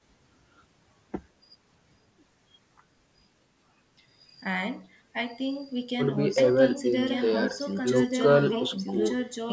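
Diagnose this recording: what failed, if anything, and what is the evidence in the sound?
From 6.38 s to the end, a doubled audio track appears: a full-band second copy, about as loud as the original, trails it by roughly a second and starts abruptly, with no decay or room colour. The likely cause is a slower second capture path. A spectrogram shows each speech pattern repeated about one second later, overlaid from 6.38 s onward.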